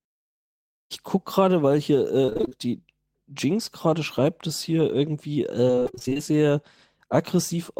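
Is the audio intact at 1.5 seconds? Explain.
Yes, the speech at 1.5 seconds plays through intact, with no dropout, click, distortion or other fault at that point.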